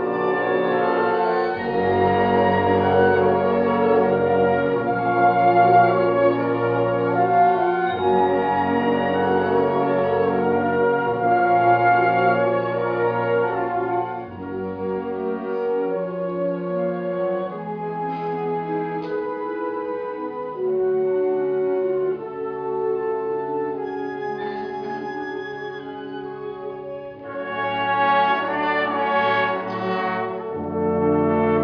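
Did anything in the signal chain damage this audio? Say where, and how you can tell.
No, nothing in this audio stood out on listening as damage from any stage of the signal chain.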